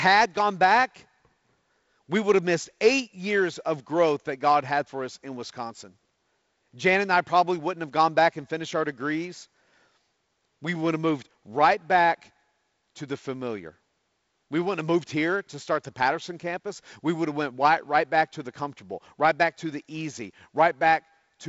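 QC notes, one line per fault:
No faults found.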